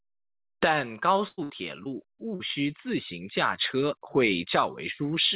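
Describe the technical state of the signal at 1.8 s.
A brief smear in the speech from 1.84 to 1.87 s is short concealed packet loss: about 20 ms never arrived, and the receiver filled it by extending the preceding sound.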